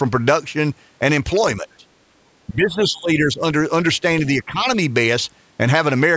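Speech suppressed in double talk hits this speech clip at 1.62 to 1.87 s, 2.48 to 3.41 s and 4.42 to 4.66 s. The voice drops in broken patches by up to about 20, 15 and 10 dB, likely because an echo canceller turned it down while the far side talked.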